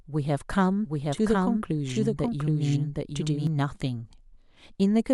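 From 0.85 s to 3.47 s the speech carries a doubled audio track: a second full-band copy runs about 0.7 s behind the first, at roughly the same level. It has no decay or added room colour, and it cuts in and out abruptly at those points. The likely cause is the signal being captured a second time through a slower path, or an edit leaving two copies overlapping out of step.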